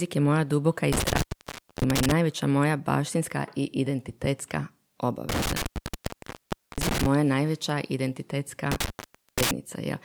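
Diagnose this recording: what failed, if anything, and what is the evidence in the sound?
What failed is the analogue wiring: an intermittent contact, like a loose cable or plug, drops this speech out three times. The first dropout spans 0.92 to 2.12 s, right after "je moja duboka i" and before "moja baštinska i identitetska", with the line open for about 0.6 s. The others run 5.29 to 7.06 s (open about 1.15 s) and 8.72 to 9.51 s (about 0.53 s). Each time the signal path physically breaks: crackle as the contact scrapes open and shut, faint hiss in between.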